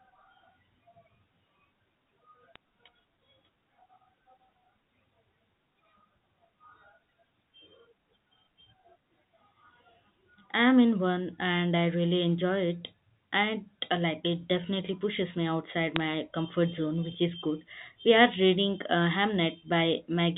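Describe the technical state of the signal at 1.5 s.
At 1.5 s the speech is intact, with nothing beyond the narrow telephone band of G.711 coding, which passes nothing above 4 kHz.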